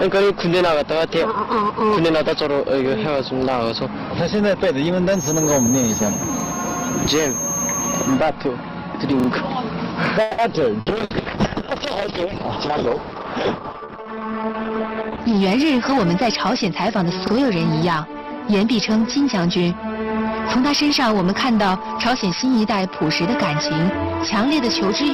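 From 5.09 to 8.22 s there's a feedback whistle: a thin tone at 6.4 kHz sitting about 5 dB under the main signal, swelling and fading slowly in level. The likely cause is the speaker-to-mic loop idling right at the edge of feedback, so that single frequency keeps ringing without ever running away into a howl.

While that whistle is still going, the first repeated buffer shows up at 6.40 to 6.44 s. A 40 ms chunk plays twice, which suggests new audio didn't arrive in time and the device replayed the last block. You hear a quick stutter with a hard seam at the join. At 9.20 to 9.28 s the same 40 ms piece plays three times in a row, so that stutter is a bit longer. Both times the repeats push the audio later rather than skipping any of it.

At 10.21 to 10.41 s comes a call audio freeze. The sound hangs as a fading buzz or hiss for about 170 ms, then picks up exactly where it stopped. Nothing is lost, but everything after it sits 170 ms later. 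That pattern points to the likely cause: packets held up in transit until the jitter buffer ran dry.

Right after that, two bursts of packet loss hit, at 10.80 to 10.89 s and 11.04 to 11.13 s. Each time, about 60 ms of audio really is gone. The receiver papers over the hole by stretching the last sound into a short, dying buzz or hiss, then jumps ahead, so there's a small clipped-out bit at each spot.

Overlapping those, a call bitrate drop runs from 10.91 to 15.44 s. The encoder falls from 128 kbps to just 8 kbps and stays at the bottom for about 4.5 s. The top end goes too, with bandwidth shrinking from 20 kHz to 6 kHz. The result is dull, muffled, watery and rough, as coarse low-rate Opus coding tends to sound, until the rate climbs back.

Near the end of that stretch, from 14.02 to 16.27 s, a jitter buffer speed-up kicks in. Playback runs at about 106% with the pitch unchanged, because the receiver is snipping out tiny pitch-period slices to burn off backed-up delay, around 150 ms in all. 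It comes across as rushed.

One last repeated buffer lands at 17.27 to 17.31 s, where a 40 ms block plays twice and produces another short stutter.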